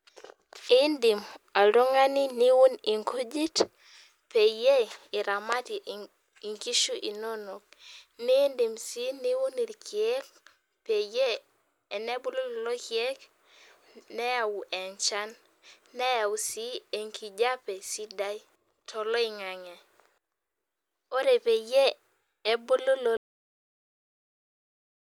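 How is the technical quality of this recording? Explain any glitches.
The recording has one clear glitch, a cut-off end. At 23.17 s the speech stops abruptly in the middle of a sound. It drops straight to digital silence with no natural decay. The final buffers were never written or played out, so the sound simply vanishes.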